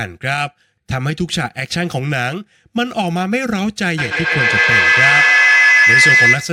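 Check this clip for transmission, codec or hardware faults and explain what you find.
One fault is present, a feedback howl. From 3.98 s to the end of the clip, a piercing tone near 1.5 kHz swells to about 8 dB above the speech, pulsing roughly every 150 ms. Two devices sharing one room feed each other, and each microphone-to-loudspeaker trip adds level, so the loop narrows onto that frequency and keeps climbing.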